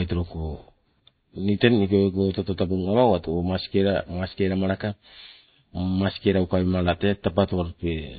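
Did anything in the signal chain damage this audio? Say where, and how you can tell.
Yes, at the codec stage, throughout the speech. Nothing sits above 4.6 kHz, a hard shelf on a spectrogram, and weak bands flicker on and off in patches, giving a watery, swirly sound. This is likely MP3 compression, consistent with about 24 kbps.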